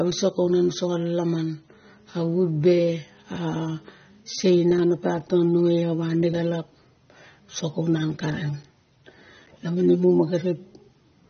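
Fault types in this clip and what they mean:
AAC compression: The speech sounds dull and muffled throughout. Nothing is heard above about 6.3 kHz, so the top of the spectrum is simply missing. That cut-off is what a low-rate perceptual codec imposes when it runs short of bits. The damage is plainly audible across the whole clip. The likely cause is AAC-LC encoding at a low bitrate, which fits a rate of roughly 24 kbps for this material.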